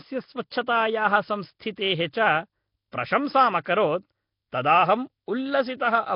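From start to end, the speech carries a rough, hissy halo and a smeared, underwater quality, most likely from Nellymoser compression, with nothing above 5.3 kHz. On a spectrogram, weak bands show as flat noise fill in blocky time slices under a hard ceiling, fitting a bitrate near 22 kbps.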